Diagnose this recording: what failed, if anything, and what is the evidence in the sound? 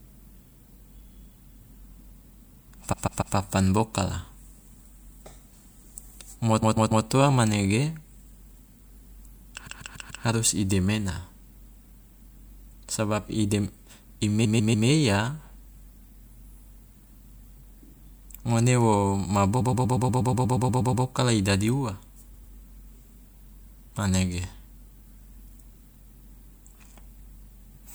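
Repeated frames at the codec or storage stage: a 144 ms block stutters at 2.92–3.35, 6.61–7.05, 9.66–10.24 s (before "harus i demena") and 14.44–14.87 s. A 120 ms block loops twelve extra times at 19.6–21.04 s, and a 96 ms block repeats at 22.33–22.53 s. Each replay lengthens the audio.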